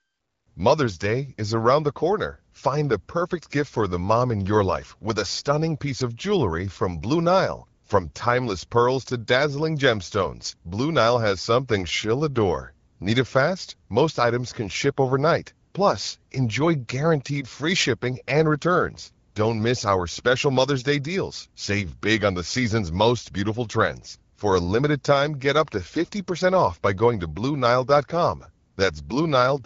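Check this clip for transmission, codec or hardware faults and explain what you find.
No transmission, codec or hardware faults turn up in this clip.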